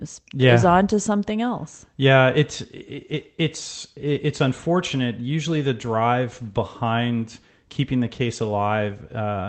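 No faults in this speech; it has come over a WebRTC call path, with the top end stopping near 8 kHz, which fits Opus running at around 20 kbps.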